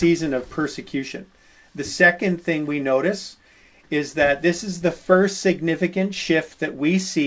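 Clock drift between sender and receiver runs through the whole clip. The sending side's clock runs roughly 2 percent slow, so the receiver's jitter buffer keeps draining instead of holding steady. This differs from a single dropout or a burst of packet loss: there is no one gap or smeared patch, just a slow, persistent mismatch that the receiver has to keep compensating for, heard as a faintly sagging, uneven pace.

The repeated timing corrections from 0.24 s to 6.56 s are how that drift becomes audible. Over this stretch the receiver keeps stretching the sound by repeating tiny slices, so playback runs at about 98 percent speed and gains roughly a tenth of a second overall. The edits all push the same way but fall at irregular intervals, giving small hiccups and a slightly wobbly tempo rather than the regular stutter of a buffer-size glitch. The G.722 call path caps everything at 8 kHz.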